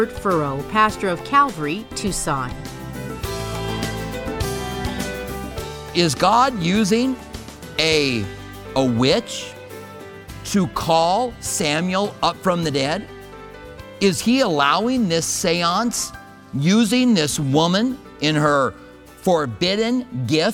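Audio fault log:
Nothing to log here: no faults turn up anywhere in this clip.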